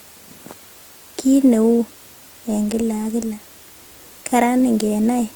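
From start to finish the speech carries plainly audible damage: the voice turns grainy and rough and has a noisy texture, yet the top end still reaches about 20.2 kHz. The likely cause is Opus compression in its music (CELT) mode at a low rate, around 24 kbps by the sound of it, where starved bands are filled with folded or noise-like content. That keeps the spectrum full, so there's graininess rather than the swirling, hollow holes that MP3 leaves.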